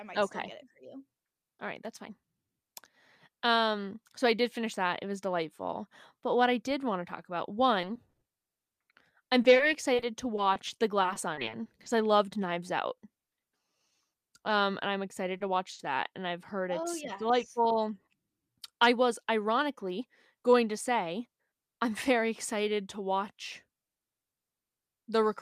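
From 7.81 to 11.88 s, just before "I loved", the speech suffers repeated packet loss and takes on a robotic sound. Around two dozen short holes open in quick succession, none longer than 40 ms. The receiver patches each one by carrying the previous sound forward, about 450 ms in total, or roughly a tenth of the stretch. Another 360 ms is simply gone. Because the patches keep recurring, the speech turns choppy and robotic, with small pieces audibly missing.

At 15.37 to 15.42 s, right before "to watch that", there is a short stall from a late packet. A packet arrived about 30 ms late, the jitter buffer ran dry, and the last sound was held for 30 ms before playback resumed from the same point. A second stall follows at 15.72 to 15.81 s, just after "excited to watch", where a 70 ms hold stretches the sound with a slight buzz or dip. Unlike the loss episode, these stalls drop nothing: they are brief, isolated lengthenings rather than a run of gaps.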